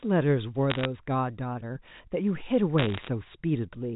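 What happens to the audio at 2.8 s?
From 2.78 to 3.08 s, bit errors on a digital phone line flip individual sample bits, at around one percent, producing sharp ticks and crackle over the speech.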